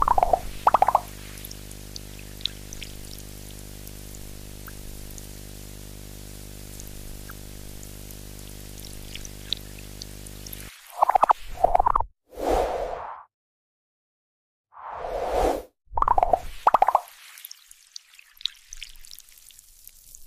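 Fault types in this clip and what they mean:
video or display buzz: a screen or video cable couples into the audio path, laying a 50 Hz buzz, hash and a thin 15.6 kHz whine under the sound until 10.7 s.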